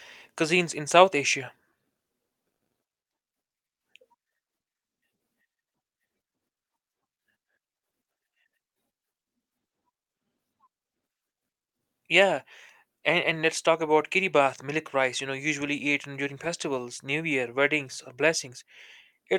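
From 1.97 to 3.04 s the speech shows repeated stalls (stutter): four short gaps, the longest 80 ms, where late packets emptied the jitter buffer and the last sound was held over. About 190 ms was filled in and nothing lost, so it drags in halting steps rather than one break.

At 3.66 s the sound drops to silence for 0.14 s, then resumes exactly where it stopped. This is a call audio freeze, likely from packets held up in transit. Unlike the stutter, it is a single clean pause adding 140 ms of delay.

From 4.71 to 5.72 s a jitter buffer slow-down stretches the speech to 91% speed. Repeated pitch periods add 95 ms to build a reserve. Pitch stays put, so this reads as drawn-out delivery, not gaps.

A jitter buffer speed-up runs from 7.60 to 9.51 s at 109% speed, trimming about 0.2 s. A milder one from 14.39 to 15.03 s runs at 105%, removing around 40 ms. Both sound hurried at unchanged pitch, the opposite of the earlier stretching.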